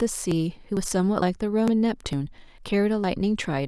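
Audio missing between chunks occurs at 0.32, 0.77, 1.22, 1.68, 2.13, 2.58 and 3.04 s. Each time, around 50 ms of speech drops out and the two sides butt together in a regular skip. The likely cause is a slice lost as each 0.5 s chunk closes and the next opens.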